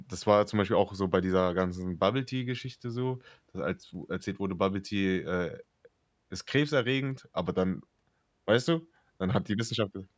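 No technical faults can be heard anywhere in the speech recording.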